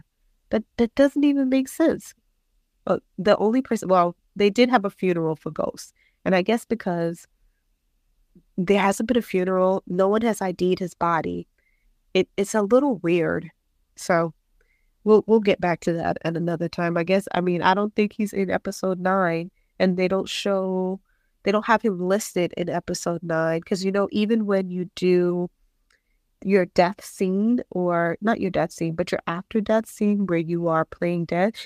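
No technical faults can be heard in this speech recording.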